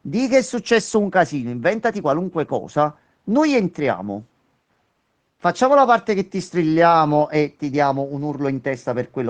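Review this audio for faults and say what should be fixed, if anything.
No faults can be heard in this speech recording. Nothing needs to be fixed.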